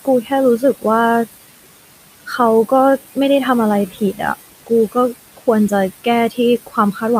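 Speech, recorded over room noise sitting about 16 dB below the voice, has noise suppressor artifacts throughout. The suppressor pulls the steady background down by about 18 dB, frame by frame, so the noise sinks in the pauses and swells back under each phrase. Speech cut by the noise suppressor occurs at 0.05–0.84 s, 2.09–3.17 s, 3.89–4.2 s, 4.52–5.72 s and from 6.04 s to the end. In each span the suppressor mistakes quiet parts of the speech for noise and turns them down with the background, by about 17, 17, 11, 19 and 15 dB at the deepest point. The affected stretches add up to roughly a fifth of a second or less in each of the first four spans, and those quiet parts sound swallowed or faint.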